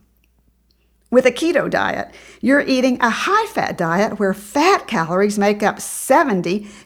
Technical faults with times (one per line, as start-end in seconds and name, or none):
5.40-6.62 block size mismatch (truncated)